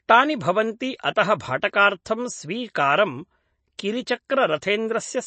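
From start to finish the speech carries plainly audible MP3 compression damage, likely from encoding at a rate around 32 kbps. Nothing survives above about 8.3 kHz, so the top octave is simply missing and s sounds lose their edge. With too few bits to go around, the encoder discards quiet spectral detail that then flickers in and out between frames, giving the sound a watery, swirling texture and softening consonant onsets.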